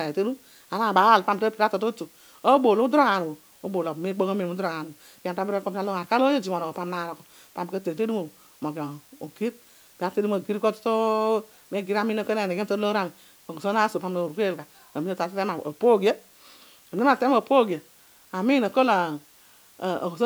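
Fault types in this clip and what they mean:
Low bit depth with dither: the speech sits over a constant, even hiss, roughly 30 dB below it and present for the whole clip, which fits a signal held to about 9 bits with dither added before rounding, so the error comes out as clean noise, not grit.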